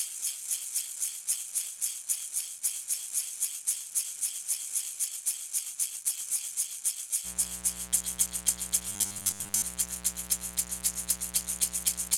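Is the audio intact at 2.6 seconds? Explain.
Yes, at 2.6 seconds the audio is intact, with no dropout, click, distortion or other fault at that moment.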